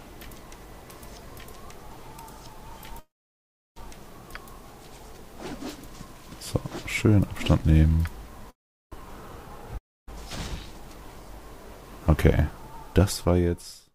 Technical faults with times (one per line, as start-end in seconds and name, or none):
2.99-3.78 call audio freeze
8.50-8.94 call audio freeze
9.78-10.09 long network dropout